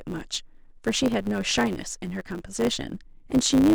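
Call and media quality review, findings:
Block size mismatch (truncated), throughout the speech: 100 Hz buzz, runs 1.07x fast at normal pitch, unlike a rate error. Block ends discarded, which fits 512-sample writes.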